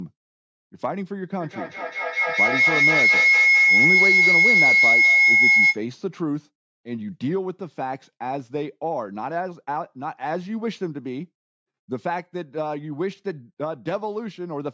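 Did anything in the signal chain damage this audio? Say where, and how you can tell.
Yes. A feedback howl runs from 1.4 to 5.83 s. Two endpoints in the same room on one call formed an acoustic loop, and each pass through microphone and loudspeaker added gain. The repeats built up instead of dying away, narrowing to a tone around 2 kHz that peaks about 10 dB above the speech and pulses roughly every fifth of a second. On a spectrogram it shows as a bright horizontal line near 2 kHz with regular beating. The waveform envelope swells until the loop breaks.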